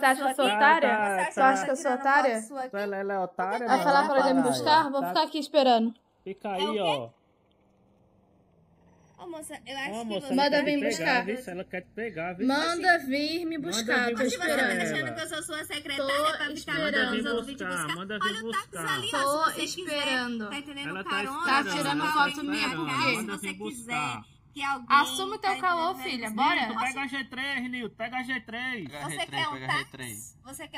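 Channels drifting apart runs throughout. Separate clocks, about 30 ppm adrift, slide the delay toward a millisecond. Summed to mono, it sounds like slow flanging.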